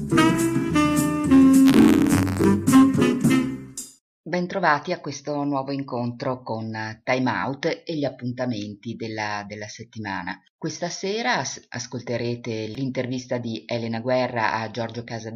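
From 1.65 to 2.46 s, the write and read positions of the playback ring buffer slip out of step and cross inside each period, which is buffer tearing. A thin sliver of every buffer, around 2 percent, still holds audio from one lap earlier, roughly 50 ms stale, with hard joins at both edges. Across that stretch this produces a robotic buzz at 86.1 Hz, which fits a 512-sample buffer, rattling under the sound.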